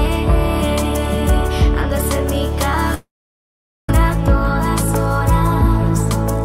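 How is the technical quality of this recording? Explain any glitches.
The recording has one clear glitch, a long network dropout from 2.94 to 3.89 s. The likely cause is that the stream stopped delivering audio for nearly a second, so about 0.94 s of material never reached the receiver. The receiver briefly stretched the last sound it had into a fading buzz or hiss, then gave up, leaving about 0.82 s of near silence. The audio resumes at 3.89 s with the missing portion simply gone.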